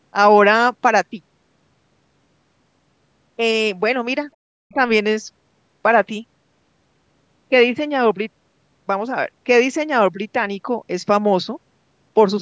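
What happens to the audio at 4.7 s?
The talker's voice dips sharply from 4.51 to 4.77 s, falling by about 40 dB at its deepest, which is heard as speech suppressed in double talk. The likely cause is an echo canceller that, with both sides talking, mistook the talker's voice for loudspeaker echo and turned it down.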